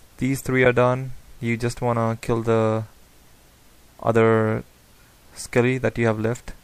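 At 0.65 s there is a burst of damaged data in the compressed stream: bytes of the encoded file were lost or overwritten, so the decoder misread those frames and briefly lost sync while hunting for the next valid frame header. The result is a brief chirp or blip in the audio.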